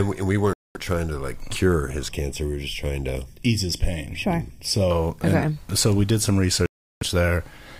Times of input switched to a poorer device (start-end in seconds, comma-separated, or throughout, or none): none